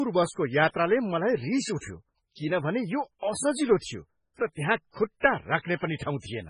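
Speech with heavy damage throughout, likely from MP3 compression. The sound is watery and swirly, s sounds chirp metallically and attacks smear. A spectrogram shows a hard ceiling at 10.5 kHz with weak bands flickering on and off below it, which fits a bitrate around 16 kbps.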